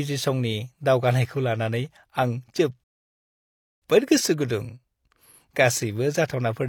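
At 2.84 s the player ran out of buffered audio, a rebuffering stall. After "दावगानायखौ लानानै आं" the speech falls silent until 3.82 s, then resumes intact at "गोसो गुदुं", adding 0.98 s.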